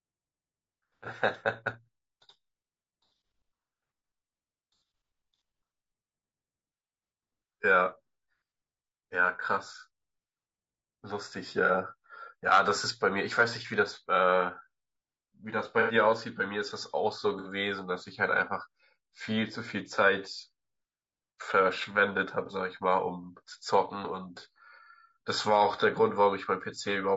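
Throughout, the speech is rough and grainy, with noise between harmonics and a synthetic-sounding top band, likely low-delay AAC compression near 32 kbps. Unlike hiss, the grain tracks the voice.

AAC frame loss with concealment occurs at 11.66–11.71, 15.80–15.94, 17.39–17.48 and 22.46–22.51 s. Each is a smeared, phasey patch rather than a silent gap, as missing audio is rebuilt from the previous spectrum.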